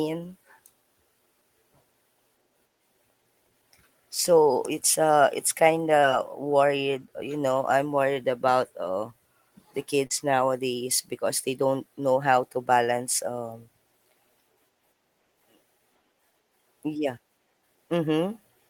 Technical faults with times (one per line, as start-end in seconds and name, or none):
6.00-6.04 short concealed packet loss
10.07-10.12 short concealed packet loss